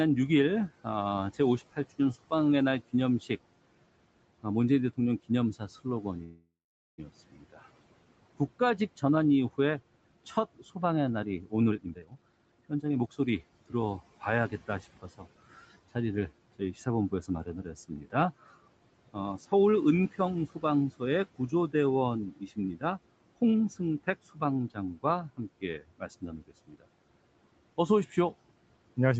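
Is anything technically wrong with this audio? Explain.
Yes. There are three kinds of fault.

Speech cut by the noise suppressor: From 0.69 to 3.3 s, 4.43 to 18.14 s, 19.13 to 22.83 s, 23.78 to 26.82 s and 27.77 s to the end, the suppressor mistook parts of the speech for the room noise and turned them down along with it. Drops reach about 18, 17, 14, 17 and 16 dB respectively, affecting roughly a tenth of a second in the first stretch and about 1.5 s in the longest. Soft consonants and word endings sound swallowed or faint.

Call audio freeze: Between 6.23 and 7.00 s the audio stalls, most likely because packets were held up and the jitter buffer ran empty. The receiver stretched the last sound into a fading buzz or hiss, then about 450 ms of silence, before playback picked up exactly where it stopped. Nothing is lost, but a 746 ms gap has been inserted and the delay has grown by the same amount.

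Jitter buffer speed-up: From 11.70 to 13.67 s the receiver was holding more audio than it wanted, so it shortened the backlog by cutting many tiny pitch-period slices, removing roughly 0.7 s in total. Speech runs at 137% speed with unchanged pitch, so this passage sounds noticeably hurried.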